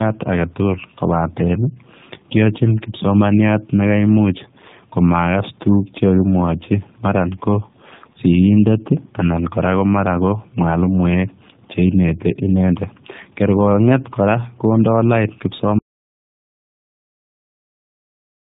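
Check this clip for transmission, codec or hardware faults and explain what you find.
Two faults are audible: tandem speech coding across the whole clip, and an audio dropout to silence from 15.79 s to the end.

The tandem speech coding runs from start to finish. The speech passed through two low-rate speech codecs in a row, the first consistent with G.729A at 8 kbit/s and the last with AMR-NB at 12.2 kbit/s, with a G.711 A-law hop between them. Each coder had to model audio already shaped by the one before, so their errors stack. The result is rough, muffled and warbly, with nothing above 3.8 kHz. A single narrowband codec would share that bandwidth limit but not the compounded roughness and swirl. The G.711 link adds little of its own, because it stores the waveform directly rather than modelling speech.

The audio dropout to silence begins at 15.79 s and lasts until the clip ends. The sound stops abruptly mid-flow and is replaced by silence, with no room tone or line noise underneath. 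That silence separates it from a quiet pause, which keeps some background hiss, and from codec muting, which often leaves comfort noise. The likely cause is lost input, such as a disconnected device, a dropped link or a stray mute, while recording carried on writing silence.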